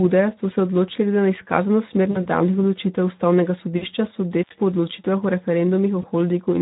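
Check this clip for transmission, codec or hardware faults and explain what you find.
Three faults are present: Speex coding damage throughout, three packet-loss concealment events, and one intermittent contact dropout.

Speex codec damage runs through the whole clip. The CELP coder has too few bits for the excitation at this low setting, which sounds like around 11 kbps, so the speech comes out plainly noisy and hoarse.

VoIP packet loss concealed by the speech codec occurs at 2.11–2.26 s (just before "odločitev ustavnega"), 3.77–3.85 s (just after "odločitev ustavnega") and 6.01–6.07 s. The decoder extrapolates its last pitch and filter across the missing data and fades the gain. Each event is a brief stretched, fading smear, with weakened speech lingering after the gap. The first two gaps fit about 40 ms of lost audio and the last about 20 ms.

Intermittent contact occurs at 4.43–4.54 s, just before "po odločitvah". 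A loose connection opens for about 76 ms. The sound drops out abruptly with crackle at both edges, leaving only faint hiss until the contact closes again.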